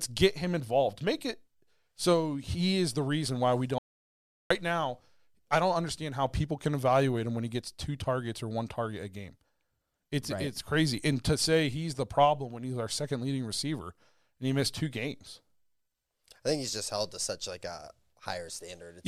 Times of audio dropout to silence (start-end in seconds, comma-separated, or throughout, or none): 3.78-4.50